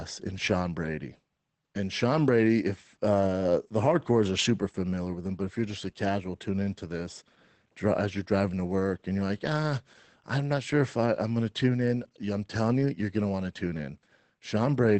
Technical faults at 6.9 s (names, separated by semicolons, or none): Opus voice compression